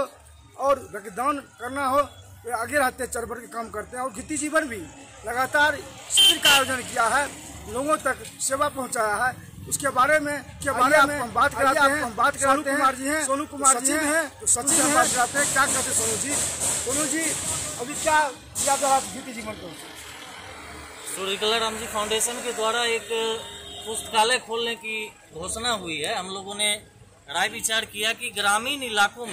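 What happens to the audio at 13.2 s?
At 13.2 s the clip is inside a doubled audio track that runs from 10.61 to 15.07 s. The same audio is heard twice, with a second full-band copy trailing the original by roughly 0.7 s and at about the same level. This is likely caused by the signal being captured again through a slower path, or by an edit holding two offset copies. The trailing copy has no decay or room colour, and it cuts in and out abruptly at both ends.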